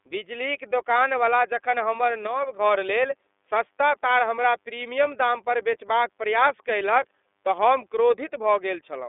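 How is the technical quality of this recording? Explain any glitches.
The recording is narrowband and codec-coloured throughout, with one brief level drop early on.

The iLBC codec is audible across the whole clip. The speech occupies roughly the 300 Hz to 3.6 kHz telephone band, and nothing reaches above 3.8 kHz. The slightly rough, synthetic edge fits iLBC's 30 ms frames, each coded on its own, and points to the 13.33 kbps mode. A plain low-pass filter would only dull the sound; here the texture itself is grainy.

A sudden gain jump runs from 2.27 to 2.59 s. The level drops by about 5 dB and then returns, with the speech and the background noise stepping down together. The likely cause is a digital gain change applied between two samples without a ramp. Unlike a fade or compressor pumping, the change is instant at both ends rather than sliding, and the noise floor moves exactly with the speech.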